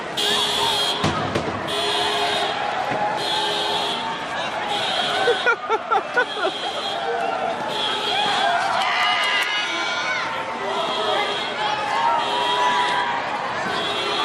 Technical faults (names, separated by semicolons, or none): none